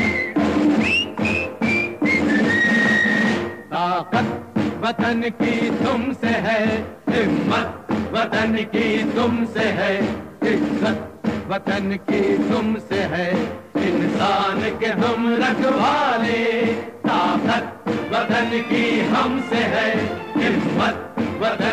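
Throughout, grainy distortion tracks the sound, with quiet passages turning gritty, consistent with low bit depth without dither, likely 9-bit rounding leaving error roughly 40 dB down.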